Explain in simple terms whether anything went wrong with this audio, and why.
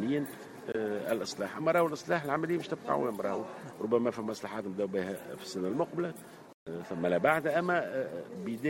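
Something did go wrong: a corrupt frame muted. Damaged chunks of data were rejected by the player, so sound drops out abruptly at 0.72 to 0.76 s and again at 6.53 to 6.68 s.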